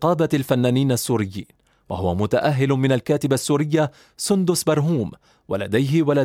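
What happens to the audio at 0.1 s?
Nothing goes wrong at 0.1 s; the speech plays through that moment intact.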